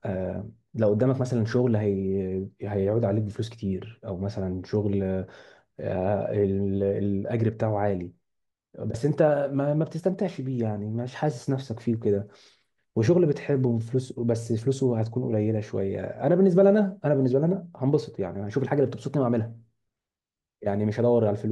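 No technical faults are audible anywhere in this recording.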